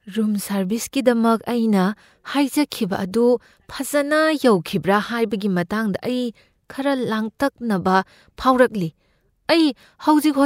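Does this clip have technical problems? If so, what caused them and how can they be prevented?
No, this clip has no technical problems, so there is nothing to trace a cause for or to prevent.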